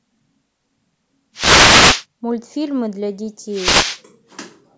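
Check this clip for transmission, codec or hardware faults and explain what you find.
There are two wireless microphone noise hits in this speech, one from about 1.34 to 2.05 s and another from 3.49 to 4.01 s. Both come from the analogue FM radio link fading, where reflected paths cancel the direct signal at the receiver. As the signal drops, the receiver's own hiss climbs up into a short swish or burst of static for roughly half to three-quarters of a second each time, then clears as reception recovers.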